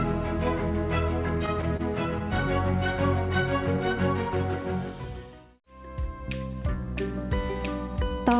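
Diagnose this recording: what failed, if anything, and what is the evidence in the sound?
At 1.77 to 1.81 s a sound is held slightly too long, with a slight buzz or dip, and then the audio continues where it left off. This is a short stall from a late packet in the network and jitter-buffer stage. The buffer ran dry and the receiver stretched the last sound by about 25 ms rather than dropping anything. The call codec's band limit at 4 kHz is audible throughout.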